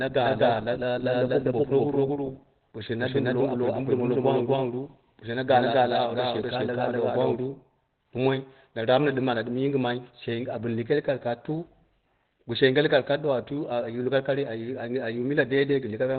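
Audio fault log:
Throughout, Opus compression. The speech sounds muffled and hoarse, with nothing above 4.5 kHz. This narrowband sound is likely Opus in its SILK speech mode. That mode engages at very low rates, fitting a bitrate near 12 kbps, and the codec damage is heavy.
0.00 to 7.36 s, doubled audio track. A second full-band copy of the speech runs about 0.3 s behind, at about the same level. It is already present when the clip opens. It has no decay or room colour and cuts off abruptly at 7.36 s. This likely comes from a second, slower capture path.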